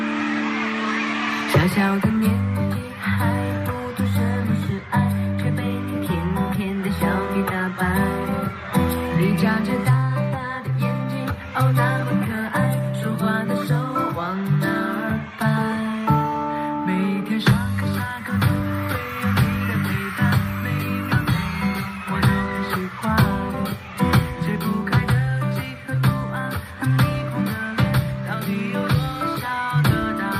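No technical faults can be heard anywhere in the audio.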